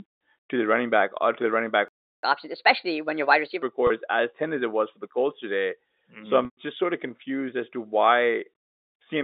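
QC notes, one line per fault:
1.88–2.23 s, playback stall: the speech cuts to silence for about 350 ms right after "to the running back", then resumes; likely the player ran dry or its thread blocked.
2.23–3.63 s, catch-up at higher speed: speech runs 1.25 times fast and about four semitones high as the player drains its backlog by resampling, then settles back.
3.87–3.90 s and 6.45–6.57 s, packet loss with pitch repetition: the first 30 ms gap is bridged by a briefly held, buzzy repeated pitch cycle. The second gap lasts 120 ms, so the repetition fades to silence before "just sort of confused" cross-fades back in.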